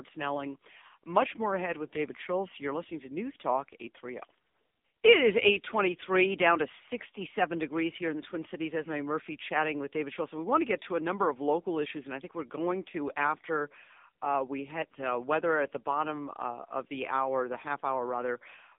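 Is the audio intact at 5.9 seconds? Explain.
No, at 5.9 seconds you're hearing the AMR narrowband mobile codec, which runs through the whole clip. The band sits between 250 Hz and 3.7 kHz, and the voice comes out buzzy and synthetic, consistent with a low-rate mode like 6.7 kbps.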